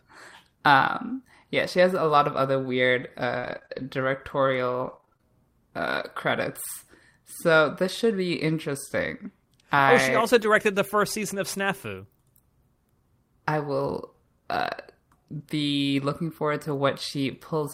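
Just after "lot of other weird", from 3.39 to 3.85 s, repeated packet loss gives a choppy, robotic stretch. Four short holes, the longest 33 ms, are each patched by extending the previous sound, so about a fifth of the span is synthetic. Unlike a single concealed drop, the glitches keep recurring. The same fault returns from 4.85 to 5.24 s, just before "uh credits". Here the seven closer-spaced holes make about a third of the span patched audio.

Between "I oh she also" and "the first season of", from 10.38 to 10.44 s, a lost packet rebuilt from error correction leaves no gap at all. Instead, 40 ms (which fits two 20 ms packets) plays from a low-bitrate backup copy and sounds briefly rougher and noisier, not smeared.

At 15.38 s a short concealed packet loss adds a brief smear or wobble where about 20 ms went missing. Here the decoder guessed the sound by continuing the last audio. Overlapping it at 15.40 s, another 20 ms is rebuilt from error correction and sounds grainy rather than smeared.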